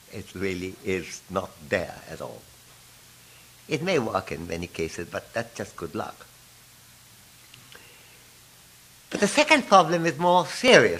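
From about 0.42 s to 10.68 s there's a short click every 2.57 s, around five in all, as regular as a metronome. That steady repeat points to clock drift buffer slips: two devices are likely running on separate clocks that disagree by a few hundred ppm, so the buffer between them creeps until a few dozen samples get dropped or repeated, and each jump in the waveform pops.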